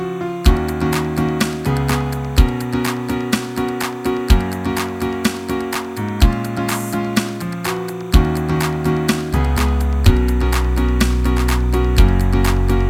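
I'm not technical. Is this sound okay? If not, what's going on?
No, there's timecode bleed throughout: a faint, steady chirping warble that flips between pitches around 1 and 2 kHz, unlike hum's single unchanging tone.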